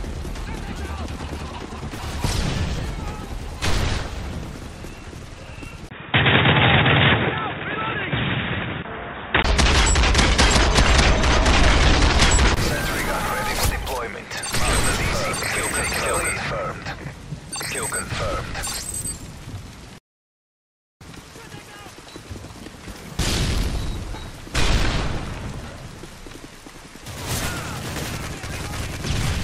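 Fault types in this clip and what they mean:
input switched to a poorer device: From 5.89 to 9.44 s the sound turns dull and boxy, likely from a narrower-band microphone. A spectrogram shows nothing above 3.7 kHz plus a faint new noise floor; the waveform holds level, with a 20 ms gap at the switch.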